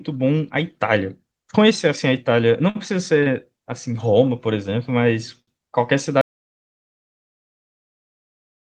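Short stalls from a late packet occur at 2.69, 3.23 and 5.42 s. Each time the jitter buffer ran empty, so the last sound was held for 57, 28 and 58 ms. On a spectrogram these show as frozen, horizontally smeared bands.

At 6.21 s an audio dropout to silence cuts the speech mid-flow and lasts to the end, likely from a lost input. From there the waveform is flat and the spectrogram is blank, with no room tone.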